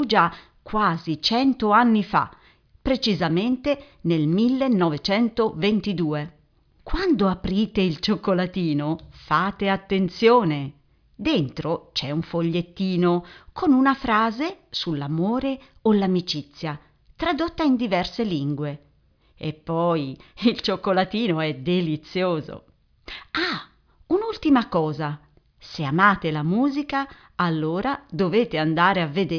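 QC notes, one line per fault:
Nothing to flag here; the speech comes through without any faults worth a QC line.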